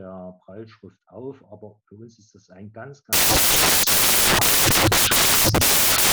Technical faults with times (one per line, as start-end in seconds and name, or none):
3.13-6.12 samples built from the wrong bytes